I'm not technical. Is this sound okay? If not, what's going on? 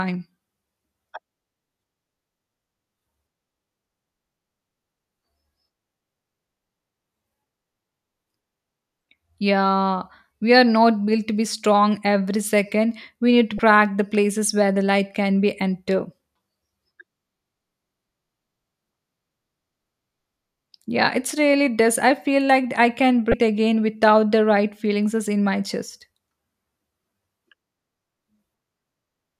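No. At 13.56 s, just after "need to", and at 23.30 s, after "feel like I can", the speech has a brief glitch. That's damaged data in a compressed stream: corrupted bits make the player lose its place and jump ahead.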